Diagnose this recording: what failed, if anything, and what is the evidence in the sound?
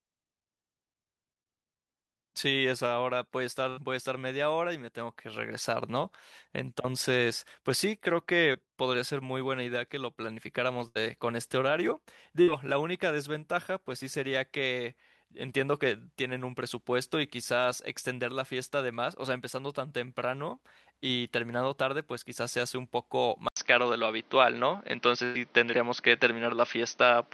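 Burst of packet loss, network stage, at 3.69–3.79 s, 10.88–11.03 s, 12.42–12.49 s and 25.24–25.36 s. Consecutive packets were lost or arrived too late, so the decoder extended the last speech for 50–100 ms as a decaying buzz or hiss, then resumed with 60–100 ms of speech absent.

Short concealed packet loss at 8.53 s, in the network and codec path. Roughly 20 ms of speech failed to reach the decoder. About 10 ms was patched by extrapolating the preceding sound before it crossfaded back, leaving a brief smear.

Input switched to a poorer device at 23.49 s, at the capture stage, likely a change to another microphone or headset call profile. An 80 ms silence precedes the change. Afterwards nothing appears above 6.2 kHz, level shifts by about 5 dB, and a new noise floor sits roughly 35 dB below the speech.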